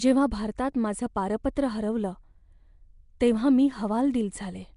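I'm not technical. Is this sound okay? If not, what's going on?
No. Throughout the speech there's a rough, hissy fuzz around the voice and a smeared, underwater quality, with the top end missing above about 10.6 kHz. This is likely Nellymoser compression, an old Flash microphone codec that replaces quiet detail with noise.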